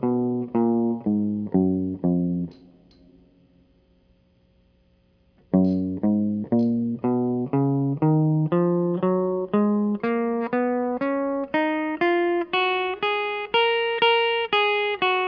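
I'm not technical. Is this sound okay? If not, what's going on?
Yes, the music sounds fine; nothing is wrong.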